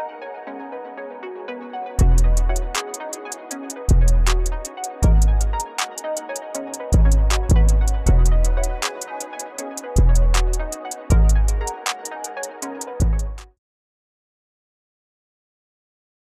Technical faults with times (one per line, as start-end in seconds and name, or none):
none